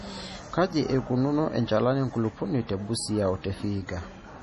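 Heavy MP3 compression runs through the whole speech clip. Nothing is heard above about 11.3 kHz, where the treble stops abruptly. Weak detail flickers in and out, giving a watery, swirly tone and metallic chirps on s sounds. This is likely a very low bitrate, near 32 kbps.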